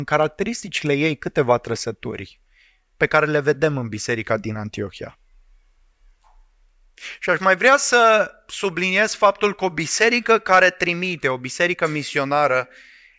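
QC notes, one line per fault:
No fault found.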